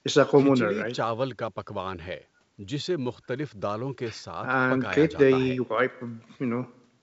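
No technical faults are audible.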